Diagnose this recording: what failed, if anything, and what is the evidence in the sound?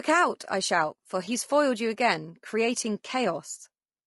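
Throughout, the speech sounds rough and grainy, with noise between harmonics and a thin, synthetic top band, likely low-delay AAC compression at a bitrate around 32 kbps (codec stage).

Between "out I shout for" and "foiled you again creating", 1.25 to 1.28 s brings a brief smeared, noisy patch. This is AAC frame loss with concealment: roughly 20 ms dropped, fitting one frame, refilled from the preceding spectrum.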